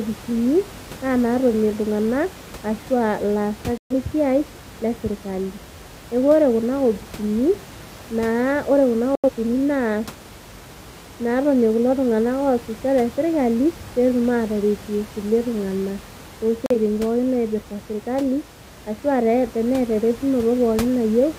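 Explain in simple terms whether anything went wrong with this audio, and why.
Yes, the speech has three digital broadcast dropouts: at 3.78 to 3.93 s, just before "lesiai le"; at 9.15 to 9.30 s, right after "ore kuna"; and at 16.66 to 16.76 s, just before "pookin naipirta sirkali". Each time the receiver lost usable data and muted, so a sliver of sound is simply gone. Unlike a natural pause, even the faint room noise vanishes in these silences, and speech resumes mid-flow rather than picking up where it stopped.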